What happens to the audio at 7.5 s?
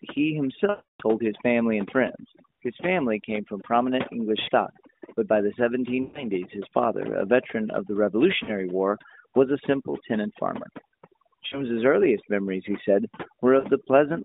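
At 7.5 s the background drops away, leaving twinkling specks. This is overdone noise removal, present throughout the clip: an over-strong noise reducer switches off individual frequency bands near its noise estimate, taking quiet parts of speech with them, heard through a narrowband phone line topping out near 3.7 kHz.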